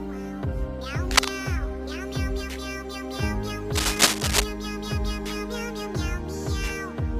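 Cable scratch noise breaks in at 1.11 to 1.28 s as a short, dense burst of scratching that sits well above the sound, roughly 10 dB louder. It returns from 3.75 to 4.45 s, longer but a little quieter. The likely cause is a worn cable or connector being moved, its contact resistance fluttering. Unlike steady crackle or isolated clicks, the noise comes in uneven rustling clusters only while something is handled.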